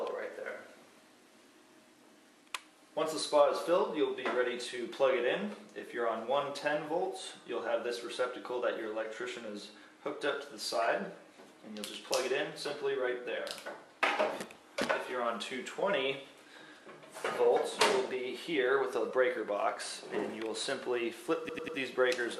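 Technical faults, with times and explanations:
21.49 to 21.78 s, repeated frames: right near the end the same 96 ms chunk plays three extra times, a quick stutter, which fits a run of compressed frames sent again. That stretches the audio by 288 ms.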